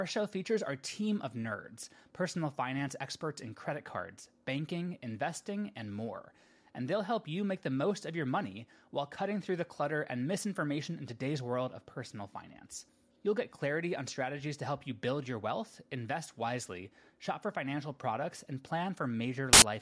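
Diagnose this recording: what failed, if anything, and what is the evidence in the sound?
The failure is at the storage and file-parsing stage: file tags played as audio. From 19.53 to 19.62 s a burst of very loud white noise cuts in with hard edges. An embedded cover picture, compressed data, was read as samples, so it sounds like static.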